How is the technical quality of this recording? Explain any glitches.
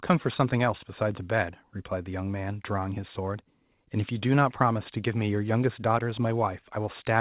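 Nothing stood out as a glitch when listening to this speech, which has the narrow band of a telephone-style call path with nothing above 4 kHz.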